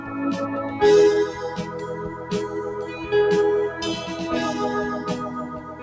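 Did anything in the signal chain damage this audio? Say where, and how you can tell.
Yes. The damage comes from the call processing stage. A noise suppressor designed for speech was left on while this music passed through. It treats steady tones, ambience and reverb as noise. Across the clip its gain swings by roughly 10 dB. You hear that as pumping and thinning. Attacks get through, while sustained parts and tails sag. The missing content above 8 kHz is the G.722 codec's normal band limit and is not this fault.

Two spots show sound cut by the noise suppressor. From 2.09 to 2.31 s the level drops by about 6 dB. From 5.57 s to the end it drops by about 7 dB. The suppressor judged them to be noise and pulled them down harder than the surrounding music.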